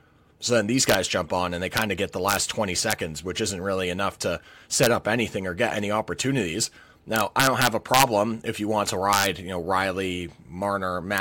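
Sample clock jitter runs through the whole speech recording. The converter clock wanders by something like a microsecond or two, so each sample lands slightly off its proper instant. The resulting error tracks the steepness of the waveform and sits roughly 30 dB below the signal. It is heard as a fine hiss and grittiness riding on louder, brighter syllables and sibilants, and it drops away in the pauses.

Integer overflow appears at 0.89–0.95 s, between "then these" and "jump on and they", then at 1.77–1.82 s, 2.29–2.36 s after "of get the", 2.91 s, 4.83–4.87 s, 7.16–8.03 s between "or get any opportunities" and "if you want to", 9.13–9.26 s, and 11.18 s. Peaks exceeding full scale by up to about 4 dB wrap to the opposite polarity instead of limiting, producing harsh, violent cracks far sharper than ordinary clipping. The longest and most sustained run of them is at 7.16–8.03 s.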